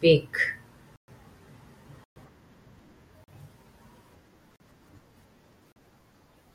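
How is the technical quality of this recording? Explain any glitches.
The speech is interrupted by five dropouts, each a block of digital silence. They fall at 0.96 to 1.08 s and 2.04 to 2.16 s, lasting 120 ms each, then at 3.24 to 3.28 s, 4.56 to 4.60 s and 5.72 to 5.76 s, lasting 40 ms each. Each block of samples was replaced with zeros, likely because the output buffer was not filled in time. The sound stops abruptly and returns with no fade. The longer blocks sound like short holes. The shorter ones are more like pops.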